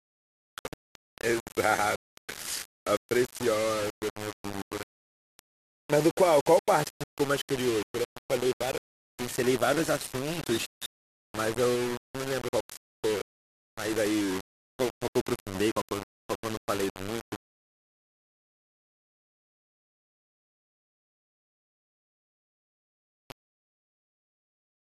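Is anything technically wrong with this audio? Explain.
Yes. The speech is likely reduced to 4 bits and rounded without dither, so low bit depth without dither runs throughout. With so few steps the rounding error tracks the waveform, giving grainy distortion roughly 15 dB below the signal, while quiet passages turn gritty or sputter toward silence.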